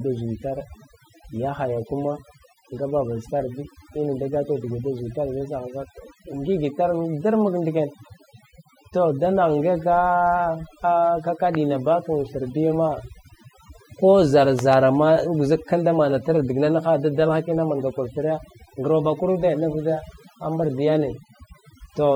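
Throughout the recording, the background drops and breaks up into twinkling, warbling specks. That is overdone noise removal: the reduction was set so strong that frequency bands near its noise estimate were pulled far down, taking quiet parts of the voice with them.

At 11.55 to 11.57 s a single loud pop lands on top of the speech, which carries on underneath. It peaks roughly 10 dB above the signal. At 14.59 to 14.75 s two pops follow in quick succession, peaking roughly 15 dB above it. The likely cause of each is a sudden voltage step or pulse from a plug, a switch, static or a driver glitch, shaped by the circuits after it.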